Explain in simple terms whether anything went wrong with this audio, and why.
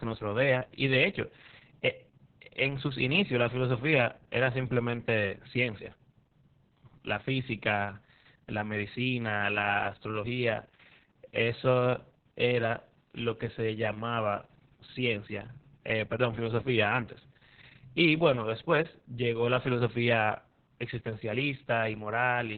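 Yes, something went wrong: the whole recording suffers from heavy Opus voice compression, from start to finish. The encoder was squeezed so hard that it dropped everything above roughly 4 kHz, leaving the narrow band of an old telephone line, and it described the speech only coarsely in long chunks. That is why the speech sounds muffled and dull, with a hoarse, slightly robotic edge, for the entire 23 seconds.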